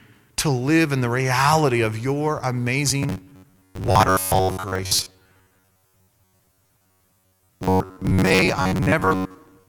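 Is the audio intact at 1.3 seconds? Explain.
Yes, the speech at 1.3 seconds is intact, with no dropout, click, distortion or other technical fault at that moment.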